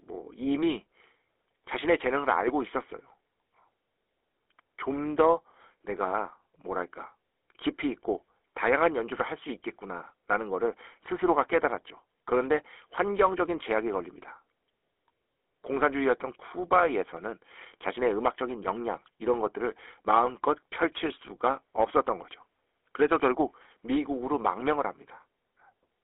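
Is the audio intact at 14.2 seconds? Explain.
No. At 14.2 s, as throughout the clip, the speech carries GSM full-rate codec damage. A vocal-tract model excited by coarse regular pulses gives a buzzy, gravelly roughness, within a 300 Hz to 3.5 kHz band, which fits a 13 kbps GSM stream.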